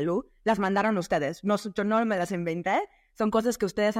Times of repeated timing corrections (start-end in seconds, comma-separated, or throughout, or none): none